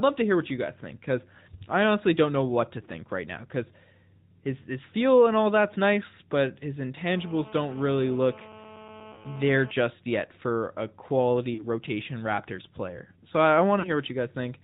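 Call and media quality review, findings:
AMR narrowband mobile codec, whole clip. Speech band-limited, nothing above 4 kHz, plainly buzzy and synthetic. Sound points to an AMR-NB mode near 10.2 kbps. Vocal-tract model with sparse pulse excitation loses natural texture.

Lost AMR speech frames at 9.14–9.26 s, 11.54–11.64 s, 13.80–13.89 s. Sound drawn out and fading each time, speech weak or rough on return. Each gap of about 40 ms fits two failed frames concealed by repeating the last pitch and vocal-tract settings with falling gain.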